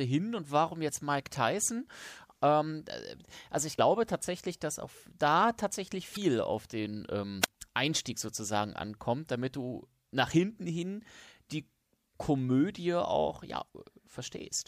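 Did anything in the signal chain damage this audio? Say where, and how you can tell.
Yes. Short chirps and blips at 3.78 s just after "äh also ich", at 6.13 to 6.17 s after "dass auf da tatsächlich", and at 13.65 to 13.69 s point to damaged data in the compressed stream. The decoder hit corrupt frames, lost sync and skipped to the next valid frame header.

At 7.41 to 7.48 s, right after "auf den", hiss swells and the sound drops to a near-silent hole of about 36 ms. This is a wireless microphone squelch dropout: the FM radio link faded, and the receiver's squelch muted its output until the signal recovered.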